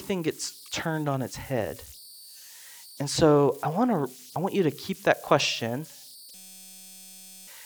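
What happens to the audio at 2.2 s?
At 2.2 s the speech carries converter idle tones, present throughout the clip rather than at that moment alone. An undithered delta-sigma converter settles into repeating bit patterns on low-level input, producing a tone around 5 kHz and grainy noise about 24 dB below the speech.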